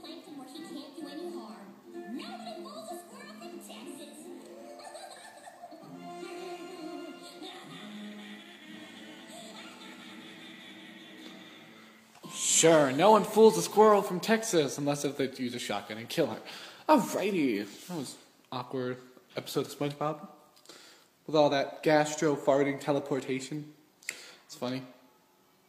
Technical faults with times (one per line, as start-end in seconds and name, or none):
none